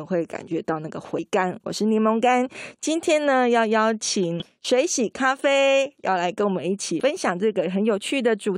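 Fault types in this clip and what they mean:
Damaged data in a compressed stream: corrupted bytes make the decoder misread frames and lose sync, causing three brief glitches in the speech at 1.17 s, 4.40 to 4.42 s and 7.00 s. Each shows as a thin vertical break on a spectrogram and a short disruption in the waveform.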